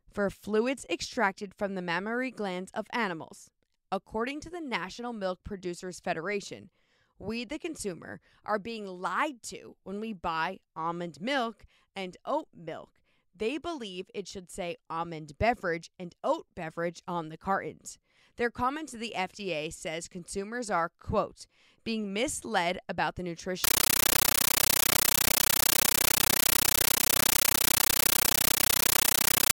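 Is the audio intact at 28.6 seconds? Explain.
No. From 23.64 s, just after "being misled about the", to the end, a compressed stream is played as audio. Undecoded AC-3 data becomes 13.3 ms noise bursts, 31.25 times a second: loud, chattering static.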